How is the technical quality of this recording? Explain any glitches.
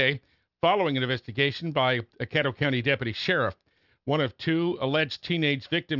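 The recording has one fault, and it runs the whole length of the speech: aliasing. Sibilants come out gritty and metallic, with a harsh, unrelated buzz where crisp hiss should be, sitting roughly 30 dB below the speech. The audio appears to have been downsampled to a rate that points to 12 kHz without an anti-alias filter first. Everything above the 6 kHz fold point reflected back down to wrong frequencies, and the spectrum runs hard against that edge.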